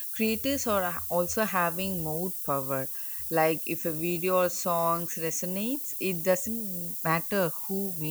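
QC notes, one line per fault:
Throughout, low bit depth with noise shaping: the speech is quantised to just 6 bits, with the rounding error pushed up the spectrum, giving a steady, thin hiss almost as loud as the voice; a spectrogram shows a dense noise floor climbing steeply toward the top band.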